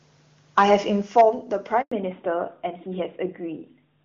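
From 0.57 to 0.75 s, the peaks are flattened with a harsh, crackling edge. This is likely microphone overload, driven about 4 dB past the converter's limit, with a small share of samples clipped.

At 1.02 s the level drops suddenly by about 4 dB, voice and background together. The likely cause is a microphone volume stepped down by the call software.

The microphone overload returns from 1.17 to 1.21 s, this time with roughly a tenth of samples clipped. The microphone volume is stepped down again at 1.21 s, by another 4 dB or so.

From 1.82 to 1.92 s the sound dies away into 100 ms of silence. This is a handover gap. No frames arrived while the call switched networks, so that stretch is lost.

From 1.92 s to the end there is a fallback to narrowband. Before it, the wideband HD Voice sound is full and clear. After it, everything above 4 kHz is gone, and the voice turns duller and rougher. 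This fits a move from AMR-WB at 23.85 kbit/s to AMR-NB at 12.2 kbit/s.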